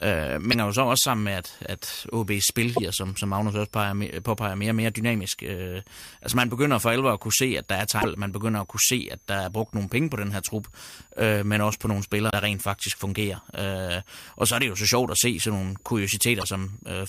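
A faint, high whistle sits under the speech for the whole clip, hovering around 7 kHz and wandering between about 5.0 and 7.3 kHz, roughly 35 dB below the speech. This is switching supply whistle: a switching power supply in the recording chain is running in an audible burst mode or beating against another supply, and its pitch shifts as the load on it changes.

Short glitches break through at 0.49 to 0.54 s, 2.73 to 2.79 s, 7.98 to 8.05 s, 12.27 to 12.33 s and 16.40 to 16.44 s, each lasting a few tens of milliseconds. These come from damaged data in a compressed stream: at each spot part of the encoded file was lost or corrupted, so the decoder misread those frames, lost sync, and produced a brief glitch while it hunted for the next valid frame header.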